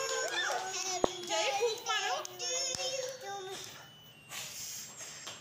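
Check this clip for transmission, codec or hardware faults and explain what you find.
There's one fault. From 0.97 to 1.05 s, a corrupt frame decoded: damaged bits across a handful of frames misplaced energy spectrally, giving a loud chirpy burst peaking around -10 dBFS.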